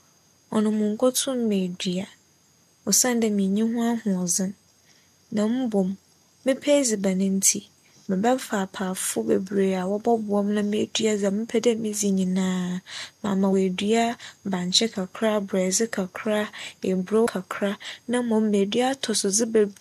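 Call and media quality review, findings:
Speech jumps forward with a short smeared blip, not a hard click, at 8.08 s, 13.52 s and 17.25 s. Compressed frames skipped in the decoder: about two 23.2 ms frames (about 50 ms of audio) lost at the first two points, about three (about 70 ms) at 17.25 s. Frames were missing from the stream or rejected as damaged. Overlap between neighbouring frames smears each join.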